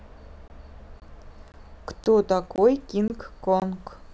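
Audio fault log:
0.48–0.50, 1.00–1.02, 1.52–1.54, 2.04–2.06, 2.56–2.58, 3.08–3.10, 3.60–3.62 s: gap between chunks. Every 0.52 s the speech drops out for 20 ms with abrupt edges, leaving a silent hole at every join between 0.5 s blocks.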